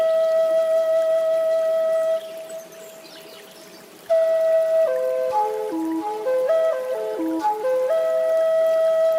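No technical faults can be heard anywhere in the recording, and the signal holds steady and continuous throughout.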